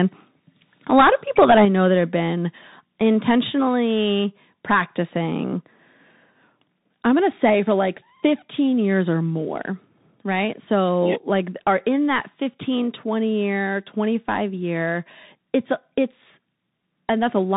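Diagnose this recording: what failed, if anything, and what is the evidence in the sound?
The whole clip sounds boxed-in and narrow, with nothing audible above about 3.8 kHz. Sibilants come out scratchy, and a fine granular hiss sits beneath the speech. This points to the codec stage, specifically the Bluetooth CVSD headset codec. CVSD sends one bit per sample, at a rate consistent with 64 kbps, telling the decoder to step up or down. Its adaptive step cannot keep pace with bright, fast-changing sound, which produces the grit heard here, while its narrowband design accounts for the band-limiting.

From 1.43 to 1.6 s the loudest syllables take on a harsh, crackly edge. The peaks sound flattened, roughly 3 dB beyond the converter's limit, though only a small fraction of a percent of samples are affected. This is likely microphone overload at the converter: the input gain was set too high, so the waveform tops were sheared off at the converter's limit, adding that brittle distortion.

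At 1.65 s, right after the distorted burst, voice and background drop together by about 5 dB in a single step. A second, smaller drop of about 1 dB follows at 3.69 s. Because speech and room level fall together, this reads as the microphone volume stepped down within call processing. The software likely detected the overload and cut the device's input gain in discrete steps rather than ramping it smoothly.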